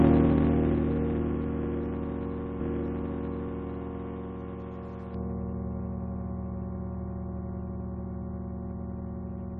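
From 5.14 s to the end of the clip, the audio turns dull and muffled, the signature of de-emphasis applied wrongly. A treble-cut filter intended to reverse pre-emphasis has been run on material that never carried any, or has been applied a second time. The result is a smooth downward tilt across the upper spectrum, reaching about 11 dB of loss at 10 kHz relative to 1 kHz, which strips away brightness and detail.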